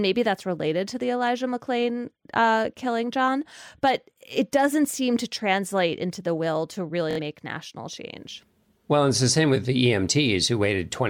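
From 7.11 to 7.20 s the speech breaks into a machine-gun buzz, then jumps ahead: Bluetooth stutter, the receiver replaying its last buffer over lost packets.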